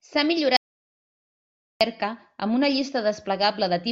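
At 0.57 s the speech cuts out abruptly into an audio dropout to silence lasting 1.24 s, until 1.81 s, with no room tone; likely the input link failed while writing continued. The waveform shows a flat line, the spectrogram a fully blank band.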